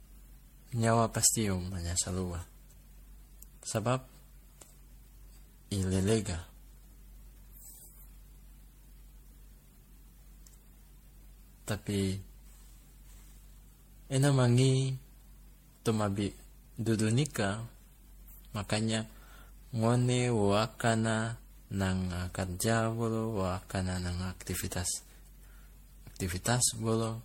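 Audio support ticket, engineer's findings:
Generation loss throughout: swirly, hollow, smeared speech, blurred consonant onsets, nothing above 16.5 kHz. Likely repeated MP3 re-encoding, around ten passes at what sounds like 64 kbit/s, each pass requantising on a shifted frame grid. Spectrogram: holes, smeared transients.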